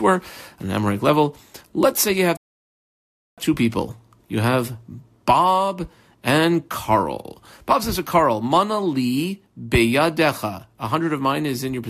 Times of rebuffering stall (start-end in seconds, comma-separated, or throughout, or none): 2.37-3.38